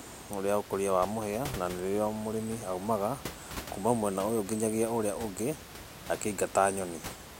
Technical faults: none

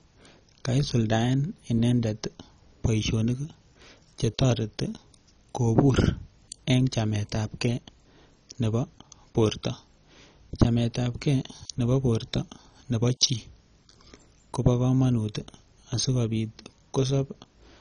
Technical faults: MP2 compression

